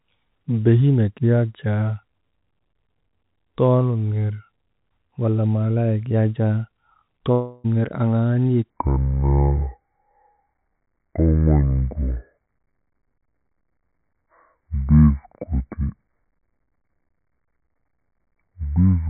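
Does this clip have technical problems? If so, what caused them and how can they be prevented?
Yes. A long network dropout runs from 7.32 to 7.66 s. For about a third of a second no audio arrived, and the receiver stretched the last sound into a fading buzz across the whole gap, so roughly 0.32 s of speech is simply missing when it resumes. This likely came from packet loss or a stall on the network link. A more stable connection, a deeper jitter buffer, or forward error correction would help prevent it.

A section at the wrong speed starts at 8.70 s and lasts to the end. It plays at about 0.61 times normal speed, so the speech drags and drops roughly ten semitones, turning deep and slow. It comes through the same telephone-band G.711 path, with nothing above 4 kHz. The likely cause is playback or editing against the wrong clock. Checking that the sample rates match at every stage before export or playback would prevent it.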